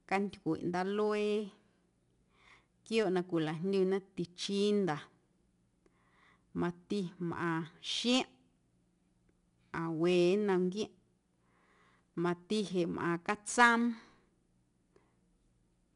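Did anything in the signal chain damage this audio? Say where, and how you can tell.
Yes, at the codec stage: the speech has been through 4-bit ADPCM compression for its whole length. A gritty hiss rides on every loud syllable and rises and falls with the level, and sharp onsets sound roughened where the adaptive step size lags behind the jump. Nothing is present above 10.6 kHz, which points to a sample rate near 22 kHz and a coded rate around 89 kbps. The codec damage is plainly audible throughout.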